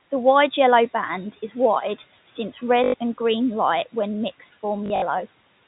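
At 2.84 s, about 100 ms of sound is lost to packet loss with the last packet repeated. The receiver replays one short chunk, which fits 20 ms packets, producing a robotic stutter that buzzes near 50 Hz. The waveform shows identical repeated blocks. From 4.86 to 5.02 s, the same fault recurs in scattered runs, the longest about 60 ms, over room noise about 22 dB below the speech and band-limited telephone audio.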